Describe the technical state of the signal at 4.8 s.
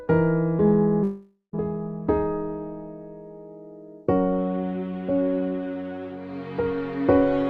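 At 4.8 s the signal is intact, with no audible technical fault at that point.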